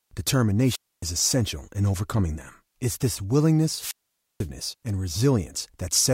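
At 0.62 s and again at 3.73 s, the speech breaks up in a wireless microphone squelch dropout. The radio signal fades and the receiver's squelch mutes the output. Hiss rises briefly, then near silence follows, for 270 ms and then 490 ms.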